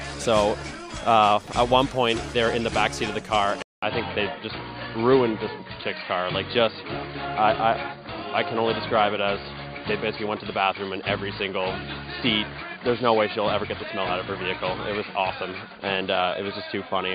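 At 3.62 s the audio drops out for 200 ms, then returns duller, with nothing above 4.7 kHz and a new background noise around 40 dB below it, at unchanged loudness to the end. The likely cause is input switched to a poorer device.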